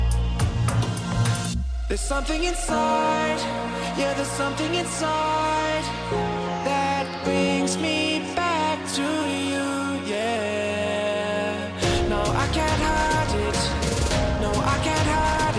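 Nothing in the audio points to a technical fault. No moment in it calls for a time or a cause.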